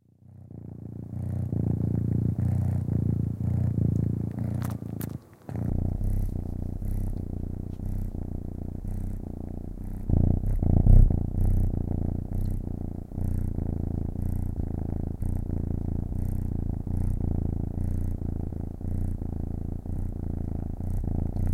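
Around 15.2 s the sound suddenly jumps ahead, and it does the same at 18.49 s and 19.95 s. That's compressed frames being skipped: chunks of the encoded stream never got decoded, so playback leaps forward by about 150 ms, then about 50 ms, then about 100 ms. That fits dropping whole frames of roughly 26 ms each. Overlapping neighbours blur each join into a short smeared blip rather than a sharp click.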